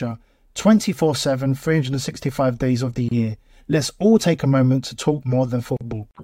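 Brief silences cut into the speech at 3.09 s, right after "days of the", for 27 ms, and at 5.77 s for 40 ms, each with smeared edges. These are gaps at joins of encoded pieces: segments encoded separately were spliced untrimmed, leaving encoder delay and end padding in place.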